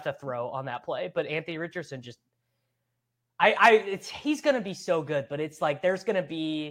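A short speech recording with no technical faults to report. Nothing in it calls for a time, a cause or a fix.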